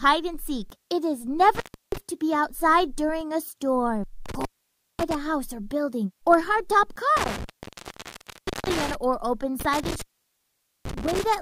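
Intermittent contact breaks the audio four times, at 1.55–1.98 s, 4.26–5.15 s, 7.17–8.95 s and 9.6–11.27 s. A loose plug or cable connection opens momentarily, so the signal drops out for about 0.32 s, 0.54 s, 1.23 s and 0.84 s respectively, leaving faint hiss. Each gap is bracketed by crackle as the contact scrapes open and closed. The dropouts are longer in the second half of the clip.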